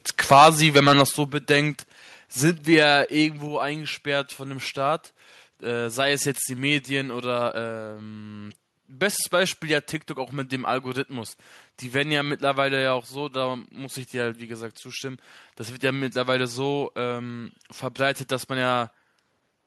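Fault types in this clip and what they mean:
Microphone overload: Harsh, crackly flattening on the loudest peaks at 0.31–0.49 s, 0.76–1.02 s and 2.78–2.88 s, heaviest at first, where a large share of the waveform is sheared off. The input gain was likely set too high, driving peaks about 8, 7 and 1 dB past the converter's ceiling.
Microphone volume stepped down: Sudden drops in overall level, speech and background together, at 0.33, 1.32, 2.46 and 3.48 s, by about 2, 5, 1 and 3 dB. This is likely the call software reacting to the clipping by cutting the device's input gain in single steps.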